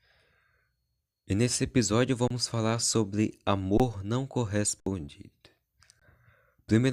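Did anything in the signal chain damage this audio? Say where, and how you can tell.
Yes: underruns with held sample in the buffer stage at 2.28 s (after "nesse episódio"), 3.78 s (after "falar sobre"), 4.80 s and 6.00 s. The waveform flatlines for 21 to 64 ms, a blank spectrogram strip, then resumes with live audio lost; 21 ms fits a 1024-sample buffer.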